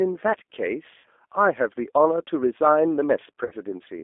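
Throughout, the speech carries the sound of the G.729 codec, which fits an 8 kbit/s G.729A link. The codec rebuilds each 10 ms frame from a vocal tract filter, a pitch predictor and a few coded pulses, so the speech comes through intelligible but rough and faintly synthetic. The damage is plainly audible. The line band runs from about 250 Hz to 3.5 kHz, leaving the sound thin and boxy.

From 0.98 to 1.08 s, and again from 3.45 to 3.54 s, there is VoIP packet loss concealed by the speech codec. Each gap points to about 60 ms of missing audio, which fits two lost packets. With no data to decode, the receiver keeps extending its last pitch and filter while lowering the gain, so the sound smears into a buzzy tone or coloured noise that fades. Because each frame builds on the one before, the speech stays weak or distorted for tens of milliseconds or more after each gap.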